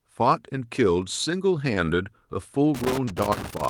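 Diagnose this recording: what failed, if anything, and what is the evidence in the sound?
At the network stage, a short stall from a late packet appears between 1.74 and 1.86 s. One packet arrived about 20 ms late, the jitter buffer ran dry, and the receiver stretched the last speech sound to cover about 20 ms before resuming where it left off. Nothing is lost, but that sound is held too long. On a spectrogram, the harmonics run flat and unchanging for a moment, and the waveform shows a briefly repeated, slightly dipping cycle.

In the analogue wiring, loose connector crackle runs from 2.75 s to the end of the clip. A worn or dirty contact is making and breaking as it moves, chopping the signal. It sounds like an irregular, scratchy crackle laid over the speech. The waveform shows scattered spikes and sharp dropouts, and the spectrogram shows random thin vertical lines reaching into the upper kHz range.

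Also at the network stage, short concealed packet loss occurs from 3.05 to 3.09 s, inside the crackling stretch. About 20 ms of audio never reached the decoder, and the receiver filled about 18 ms of it by extending the preceding sound before blending back into the real signal. It is heard as a brief smear or wobble. On the spectrogram, the onset detail blurs into a smoothed patch, and the waveform shows a short, overly regular segment.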